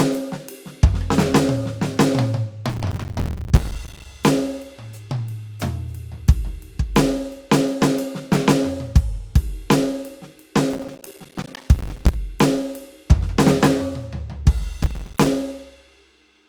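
The processor repeatedly failed to fill its short audio buffers, around 5 ms each, in time, leaving runs of tiny silent gaps. That processor overload crackle tears through the music from 2.70 to 4.05 s, from 10.73 to 12.14 s, and briefly from 14.83 to 15.27 s.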